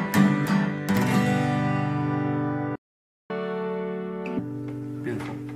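The audio cuts to silence from 2.75 to 3.30 s, a playback stall of about 0.54 s, likely because the player ran out of data or its thread was blocked. From 3.30 to 4.39 s it then runs fast and sounds higher, roughly seven semitones up at 1.5 times speed: catch-up at higher speed, as the player resamples its backlog to recover the lost time before returning to normal.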